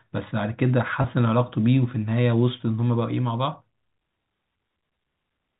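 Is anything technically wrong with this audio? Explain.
Yes. From 1.02 to 1.04 s there is a brief packet loss with pitch repetition. About 20 ms of the signal, which fits a single lost packet, went missing, and the receiver covered the gap by repeating the last pitch period of the speech. Because the gap is so short, it comes across as a momentary held, slightly buzzy tone rather than a hole. A plain dropout would instead leave an audible silence or a click at its edges. Around it, the 4 kHz telephone band of the G.711 coding is audible.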